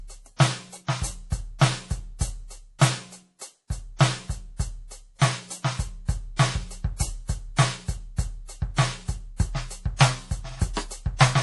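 From the start the music carries plainly audible MP3 compression damage: nothing remains above 11.5 kHz, and weak detail swirls in and out between frames, which fits a low bitrate around 48 kbps. That watery swirl distinguishes it from a simple treble cut.

From 2.12 s to 11.28 s, a click recurs every 2.29 s, about five times. These are likely clock drift buffer slips: a clock mismatch of roughly 70 ppm forces a few samples to be dropped or repeated. The steady interval sets them apart from random dropouts.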